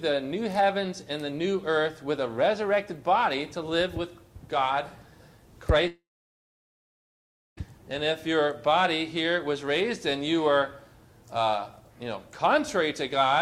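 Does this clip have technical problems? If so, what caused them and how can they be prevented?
Yes. At 5.87 s the sound smears into a fading buzz, drops to silence for about 1.53 s, and resumes abruptly at 7.59 s with roughly 1.7 s of material gone. This is likely a long network dropout: the stream stopped arriving, so the receiver stretched the last received sound to cover the gap, let it decay, and then fell silent until packets returned, skipping what was lost. A more stable connection, larger jitter buffering, or forward error correction with retransmission would prevent this.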